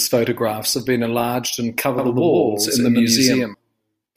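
From 1.98 s to 3.54 s the speech carries a doubled audio track: a second, equally loud copy trails about a tenth of a second behind, likely from a slower capture path. It switches on and off abruptly, and the spectrogram shows every full-band onset stacked twice.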